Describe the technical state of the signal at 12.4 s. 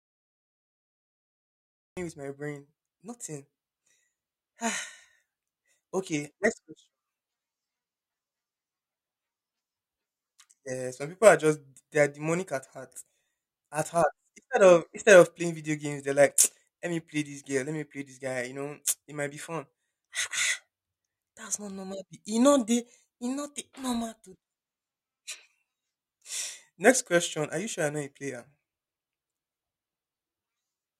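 Nothing is wrong with the signal at 12.4 s: the speech plays through intact at that moment with no audible technical fault.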